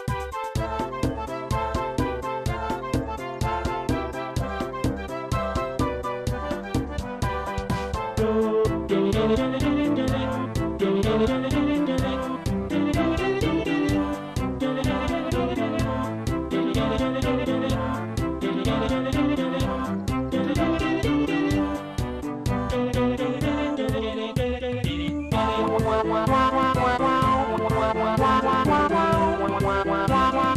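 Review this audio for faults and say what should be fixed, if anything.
Nothing needs fixing, as no technical faults can be heard anywhere in the signal.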